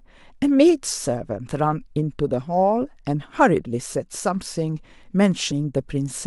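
At 5.51 s the speech is hit by a brief burst of damaged data in the compressed stream. A short run of corrupted bytes makes the decoder misread the affected frame and lose sync until it finds the next valid header, producing a quick glitch lasting about 18 ms.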